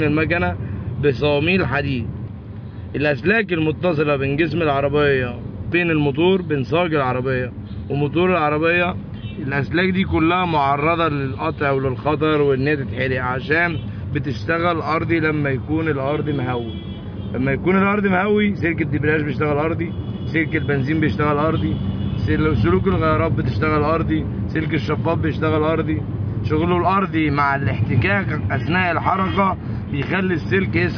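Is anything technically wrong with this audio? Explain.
No, no technical faults here.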